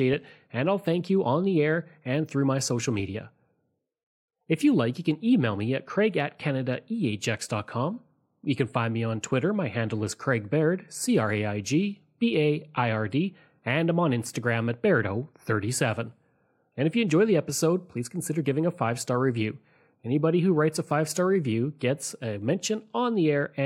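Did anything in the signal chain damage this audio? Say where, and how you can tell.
No, nothing along the chain from capture to playback audibly damaged this speech recording.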